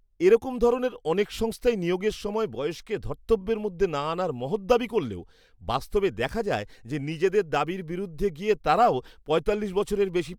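Nothing in the speech here stands out as a technical fault, so there's nothing to flag at any point along the way.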